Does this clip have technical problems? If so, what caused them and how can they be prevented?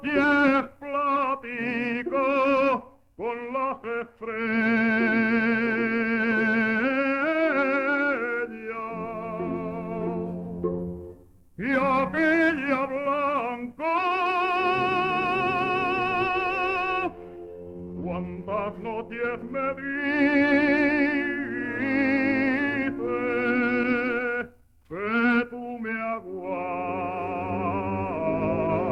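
No, nothing stood out on listening that would point to a technical problem in this clip.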